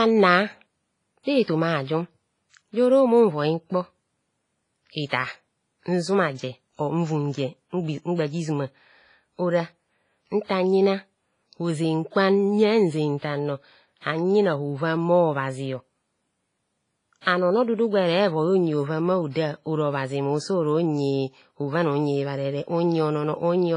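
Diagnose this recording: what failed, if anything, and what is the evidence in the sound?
Codec stage. The whole speech clip sounds washy and ringing, with hiss that swells and fades with the signal. Nothing is present above 10.5 kHz. This is likely heavy WMA compression, and the damage fits a low bitrate near 24 kbps, where weak spectral lines get zeroed.

Pre-echo, also at the codec stage. Short hiss runs ahead of sharp attacks at 1.24 s (38 ms), 10.44 s (59 ms), 17.21 s (53 ms, just before "an ono dudu gwere") and 19.31 s (50 ms). The coder spread noise sized for the loud onset across its whole block, so the quiet moment before each attack is filled and the attack is smeared.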